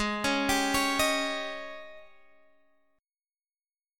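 No technical faults can be heard anywhere in this audio.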